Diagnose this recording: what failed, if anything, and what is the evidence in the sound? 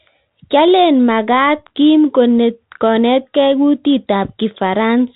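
Codec stage: a Bluetooth CVSD headset codec throughout, with nothing above 4 kHz, granular hiss, and scratchy s sounds where one-bit steps lag, fitting a 64 kbps link.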